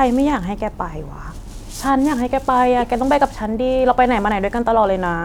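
A short speech recording carries one defect: a corrupt frame decoded between 2.79 and 2.85 s. For roughly 56 ms, spanning what sounds like a few consecutive codec frames, damaged bits were played anyway, so misread gains and codes put energy at wrong frequencies and produce a brief glitch that peaks around -20 dBFS. Unlike a dropout or concealed packet loss, which leaves a gap or smeared repeat, this event adds foreign, unrelated energy.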